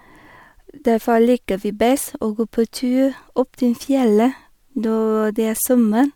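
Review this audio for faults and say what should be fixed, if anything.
No faults can be heard anywhere in the speech. Nothing needs to be fixed.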